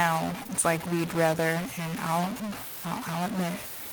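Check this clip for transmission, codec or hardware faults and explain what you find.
Two faults are present: a stuck bit running through the whole speech clip, and a short concealed packet loss near the start.

Stuck bit, throughout the clip: the audio carries distortion, and the gaps between phrases are filled with a gritty noise floor instead of silence. The likely cause is one data bit held at a fixed value by a broken line or converter. About half the samples are then pushed off by that bit's weight, following the waveform. Quiet passages suffer too, because small values flip sign around zero and the frozen bit turns them into steady noise.

Short concealed packet loss, from 0.43 to 0.51 s: two consecutive 20 ms chunks of the stream failed to arrive, the first spanning 0.43 to 0.47 s and the second 0.47 to 0.51 s. The receiver patched each hole by extending the preceding sound, carrying its pitch forward or substituting shaped noise, for roughly 15 ms and 19 ms respectively, then crossfaded back into real audio. 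The result is a brief smeared, wobbly stretch lasting under a tenth of a second, where a quick consonant could be lost.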